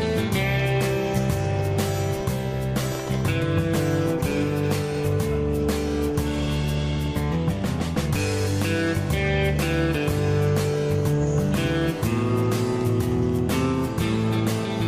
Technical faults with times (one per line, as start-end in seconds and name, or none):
10.76 dropped samples